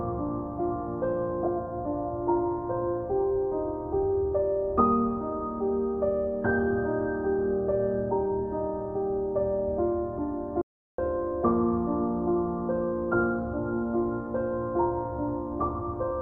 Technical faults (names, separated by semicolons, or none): audio dropout to silence